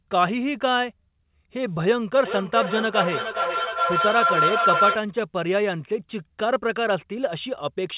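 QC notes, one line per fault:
2.25–5.04 s feedback howl: a tone near 1.5 kHz swells out of the speech, pulsing about every 0.4 s and peaking about 2 dB above it. Loudspeaker output re-entered the microphone with gain above unity, so each round trip grew and narrowed onto the loop's favoured frequency.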